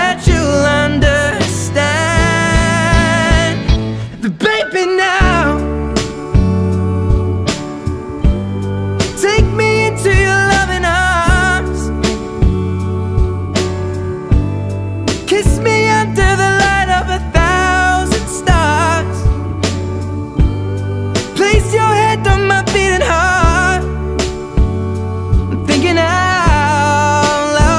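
No technical faults are audible anywhere in the recording.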